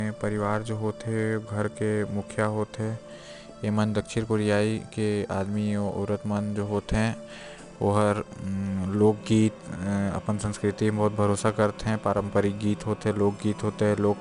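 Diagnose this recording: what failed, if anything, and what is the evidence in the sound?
4-bit ADPCM compression, at the codec stage, runs through the whole speech recording. A gritty hiss rides on every loud syllable and falls away in quieter moments, and sharp onsets sound roughened because the adaptive step cannot grow fast enough to follow them. Nothing is present above 10.6 kHz, which suggests a sample rate near 22 kHz; at 4 bits per sample, that fits a stream of about 89 kbps.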